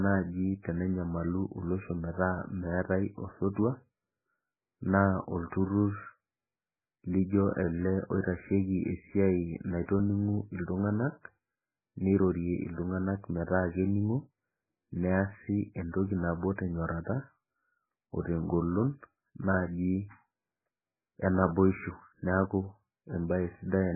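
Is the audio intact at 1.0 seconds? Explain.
No. At 1.0 s, as across the whole clip, the speech carries heavy codec damage, likely from MP3 compression at a very low bitrate, around 8 kbps. With so few bits available, the encoder discards weak frequency components, and these flicker in and out from one frame to the next, giving the speech a watery, swirling texture with smeared onsets. Nothing remains above 2.5 kHz, so the treble is gone and sibilants sound dull.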